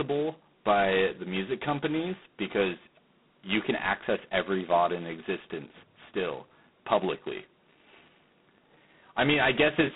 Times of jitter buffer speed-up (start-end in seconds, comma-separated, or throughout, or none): none